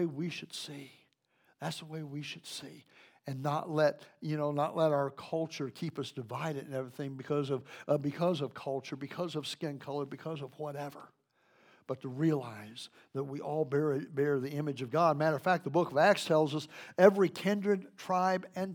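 Nothing in this recording stands out as a technical fault, so there's no glitch or defect to point to at any moment.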